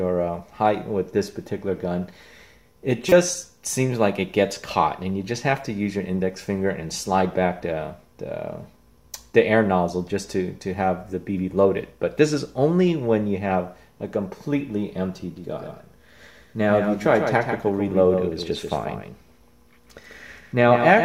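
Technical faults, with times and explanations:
3.09–3.12 s, corrupt frame decoded: A single damaged compressed frame was played despite flipped bits. Its misread gains and codes put energy at the wrong frequencies for about 30 ms, which produces a loud chirp, squeak, blip or burst of noise peaking near -5 dBFS.
15.36 s to end, doubled audio track: A second full-band copy of the sound cuts in abruptly and trails the original by roughly 150 ms, about 5 dB quieter, with no decay or room colour. The likely cause is capture through a second, slower path.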